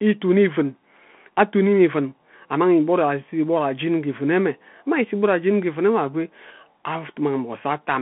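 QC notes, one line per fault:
Throughout: Bluetooth CVSD headset codec. The speech sits in a narrow telephone band, about 150 Hz to 3.4 kHz, with nothing above 3.8 kHz. Codec damage is plainly audible. One-bit delta steps lag fast changes, leaving grit and hiss, consistent with a 64 kbps link.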